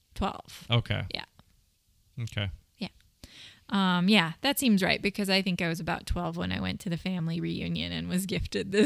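From 6.27 to 8.07 s, the speech picks up a thin, gritty fizz. It rides on the louder and brighter sounds and fades with them. This is crude rate conversion. The audio was resampled by simple linear interpolation, with no anti-aliasing filter. The ratio points to a 32 kHz to 44.1 kHz change. The leftover error repeats in a fixed pattern and makes inharmonic tones. They sit roughly 35 dB below the speech.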